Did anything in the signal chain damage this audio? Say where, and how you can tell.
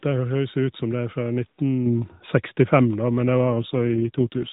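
Yes, in the network-controlled codec stage. From 3.50 s, right after "men det", to the end, the speech turns rougher and more synthetic. This fits an AMR rate drop from 12.2 to 5.9 kbps, with bits shifted to error protection. The AMR narrowband band limit stays put and there is no gap, so it is not packet loss.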